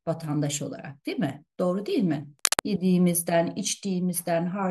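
From 2.39 to 2.67 s, a dense, uneven scratching rustle sits over the speech at about its level: cable scratch noise, likely from a worn connector being moved.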